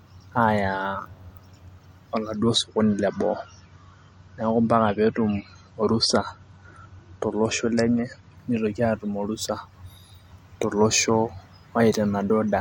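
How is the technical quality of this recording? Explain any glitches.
The recording has one clear quality fault: a six-second stretch of reduced fidelity partway through the speech.

From 2.37 s to 8.37 s, the stream drops to a lower bitrate. A slowing connection pushes an adaptive player onto a leaner encoding, here consistent with MP3 falling from around 128 kbit/s to about 39 kbit/s. The encoder discards the top of the spectrum, with nothing above 10.6 kHz, so sibilants dull and the voice takes on a swirly, artefact-laden texture. Quality changes abruptly at both edges without any gap, the drop beginning just before "nitoki atumborusa".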